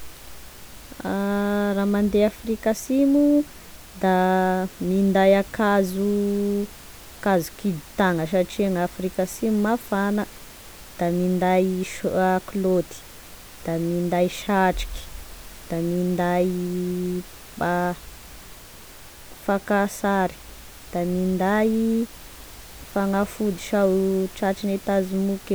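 A speech recording with nothing technically wrong in it. Some background noise from the room sits about 22 dB below the speech, and it belongs to the recording itself.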